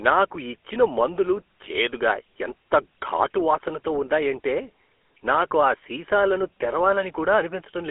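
Speech heard through a GSM full-rate codec for its whole length. Nothing passes above about 3.7 kHz, the band is telephone-narrow, and the regular-pulse excitation leaves a plainly audible buzzy, gravelly roughness on the voice, which fits the 13 kbps full-rate mode.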